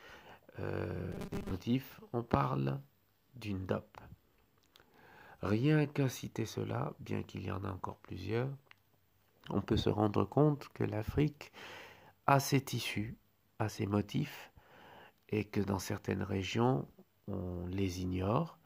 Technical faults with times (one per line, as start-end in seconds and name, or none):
1.12-1.52 robotic sound from repeated short buffers